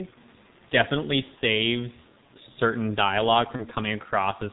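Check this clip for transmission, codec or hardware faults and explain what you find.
Two faults stand out: the whole clip has been through a G.723.1 codec, and there's one short packet-loss dropout near the end.

The G.723.1 codec damage runs from start to finish, and it's heavy. This codec squeezes speech into 30 ms chunks at a very low rate, consistent with its 6.3 kbit/s mode, and it cuts everything above 4 kHz. It also tracks changes in the voice sluggishly, so the speech comes across dull, muffled and rough, with smeared consonants.

The VoIP packet loss concealed by the speech codec hits from 3.56 to 3.65 s. The gap sounds like one missing 30 ms frame. The decoder filled it by stretching its last pitch and spectral shape and fading the level down, so you get a brief fading smear in place of the speech. Because each frame builds on the one before, the damage carries on past the gap, and the speech stays weak or distorted for a moment until it settles, about 85 ms in total. 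The faint room noise, roughly 33 dB under the speech, is just the room.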